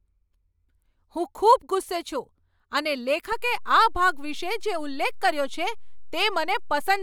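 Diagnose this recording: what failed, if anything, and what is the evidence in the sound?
A DC step at 3.32 s, likely from the converter or an offset input switching in: a low thump, then the baseline holds about -31 dBFS off zero to the end.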